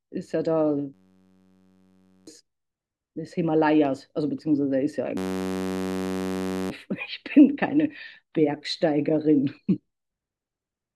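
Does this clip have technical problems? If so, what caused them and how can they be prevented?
Yes. A system hang loop hits at 0.94–2.27 s and 5.17–6.70 s. A 10.67 ms slice, likely a 512-sample buffer, repeats as a steady 93.8 Hz buzz. Waveform: identical repeating cycles; spectrogram: harmonic lines at 93.8 Hz multiples. Prevent it with a driver watchdog that mutes on stall.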